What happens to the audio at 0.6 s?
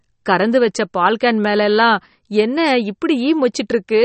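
At 0.6 s the speech sounds watery and swirly, with sibilants chirping metallically and nothing above 8.4 kHz, as it does throughout the clip. The likely cause is MP3 compression at a starved bitrate, which fits about 32 kbps: the encoder cuts the treble and zeroes weak frequency lines that flicker between frames.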